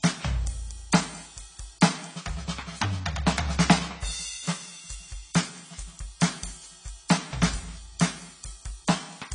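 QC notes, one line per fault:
Throughout: AAC compression, likely the cause. The music has nothing above 10 kHz, with plainly audible warbling, smeared damage on sustained tones, which fits AAC-LC at around 24 kbps. That swirling texture, not just a dull top end, separates it from simple low-pass filtering.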